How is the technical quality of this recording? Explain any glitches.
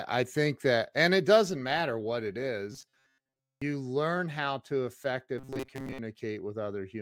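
Two stretches of the speech turn into a rigid metallic buzz, from 2.72 to 3.62 s and again from 5.38 to 5.98 s. The voice still tracks the words loosely, but a fixed buzz near 133 Hz runs through it. This is robotic sound from repeated short buffers, likely caused by audio arriving too slowly, so playback loops a tiny slice, here about 7.5 ms, while most of the real audio in those stretches is skipped.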